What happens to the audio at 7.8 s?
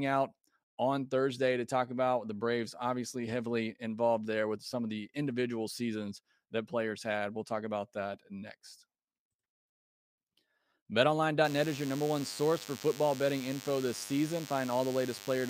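Nothing goes wrong at 7.8 s; the speech there plays through intact, with no dropout, glitch or distortion.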